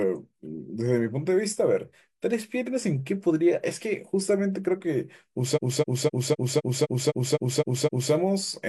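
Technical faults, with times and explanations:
5.53–8.09 s, repeated frames: the same 256 ms block of compressed audio is decoded again and again, ten extra times, so the speech stutters in a regular loop instead of moving forward. The duplicated frames add 2.56 s to the clip's running time.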